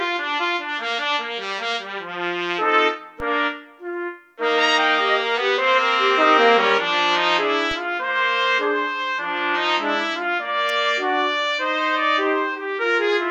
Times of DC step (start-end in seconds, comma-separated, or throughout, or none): 3.20, 7.71